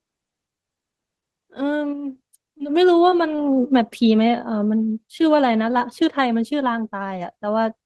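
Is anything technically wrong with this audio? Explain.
Yes. The speech has two kinds of network fault close together.

Short concealed packet loss occurs at 1.20, 2.58, 3.10 and 3.36 s. Each time about 20 ms of audio never arrived, and the receiver extended the preceding sound to cover the gap before blending back. The result is a brief smear or wobble.

A short stall from a late packet follows at 3.54 s. The jitter buffer ran dry, so the last sound was stretched by about 22 ms until the packet arrived. Nothing is lost, but that sound lingers slightly too long.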